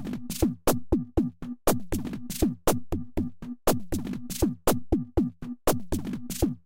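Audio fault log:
The signal stays continuous across the whole recording of sounds, with nothing heard that departs from the captured sound itself.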